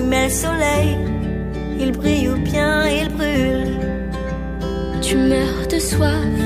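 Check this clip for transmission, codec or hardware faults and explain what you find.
There is one fault, a hardware one: mains hum runs through the whole clip. A steady 60 Hz tone sits under the sound from start to finish. It comes from power-line current leaking into the signal path through a ground loop or a nearby transformer. It is strong, roughly 10 dB below the signal, so it is plainly audible as a low drone. On a spectrogram it shows as an unbroken horizontal line at 60 Hz, with fainter lines at its low harmonics. In the waveform, the quiet stretches never settle to flat silence but ride on a regular low-frequency wave.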